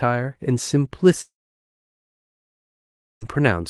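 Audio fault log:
1.21 to 3.23 s, long network dropout: the speech breaks off, the last sound smears on for a moment as a fading buzz, then there's about 1.9 s of silence before speech returns with the gap simply gone. Likely a two-second stall in arriving packets that concealment couldn't bridge.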